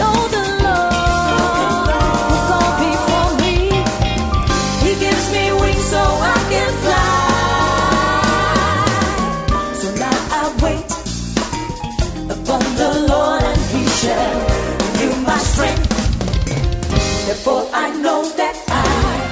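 No technical faults can be heard anywhere in the clip, so there is nothing to place in time order.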